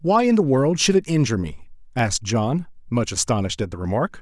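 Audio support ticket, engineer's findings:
Regular clicks in the speech, roughly four, from 0.94 s to 4.10 s. Spacing is a steady 1.06 s. Likely clock drift buffer slips between two unsynced devices, about 300 ppm apart. Each slip drops or repeats a few samples.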